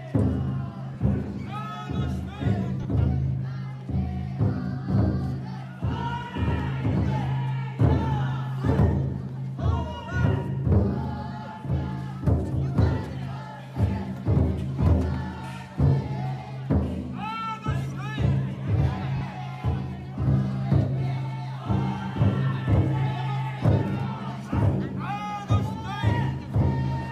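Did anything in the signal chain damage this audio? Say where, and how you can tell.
Yes. The damage happened on the Bluetooth radio link, in the form of lost LE Audio frames. There are three short patches: at 0.94 s, at 2.83 to 2.85 s, and at 19.17 to 19.21 s, lasting roughly 10, 20 and 40 ms, which fits one, two and four 10 ms LC3 frames. The decoder covers each gap with a repeat of the last spectrum with scrambled phases, so tonal content turns briefly into a noisy smear. The patches sound hazy rather than silent or clicky, which rules out plain dropouts or buffer underruns.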